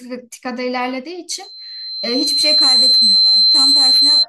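A microphone picked up its own loudspeaker, causing loudspeaker feedback squeal: from 1.43 s to 4.26 s a 4.1 kHz tone swells over about one and a half seconds, ending roughly 10 dB above the speech.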